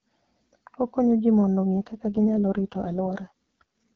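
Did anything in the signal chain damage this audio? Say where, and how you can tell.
Yes, an AMR rate drop at the network stage: from 1.77 to 3.63 s, after "ji mondo", the speech turns raspy and synthetic at unchanged bandwidth with no gap, which points to a drop from the clear wideband rate to the lowest AMR-WB rate.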